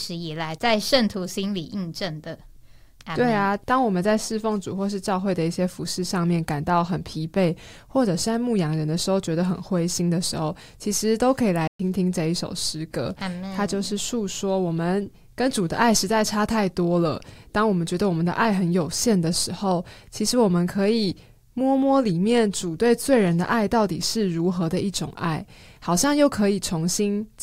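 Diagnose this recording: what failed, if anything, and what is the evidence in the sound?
The speech cuts to dead silence from 11.67 to 11.79 s, a 120 ms gap in mid-flow, then resumes. This is a playback stall, likely the player running short of data or its thread being blocked until output recovered.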